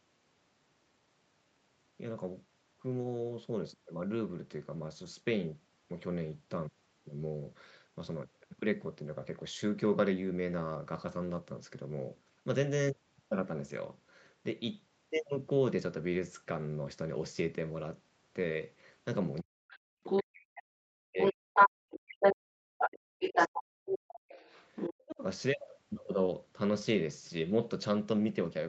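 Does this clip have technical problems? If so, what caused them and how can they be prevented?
Yes. From 19.45 to 19.91 s the echo canceller gated the background, yanking the room sound down by about 36 dB while the loudspeaker played. Gentler, slower suppression settings would avoid that.

The other side's voice leaks through from 19.68 to 20.23 s, 21.19 to 22.35 s and 22.79 to 25.15 s, sometimes as loud as the talker, likely from leftover loudspeaker echo the canceller missed. Headphones would stop it.

Speech is suppressed in double talk from 20.04 to 21.8 s, 22.33 to 24.38 s and 25.06 to 25.2 s, dipping by as much as 40 dB, likely the canceller ducking everything while both sides spoke. Headphones or a better double-talk detector would prevent that.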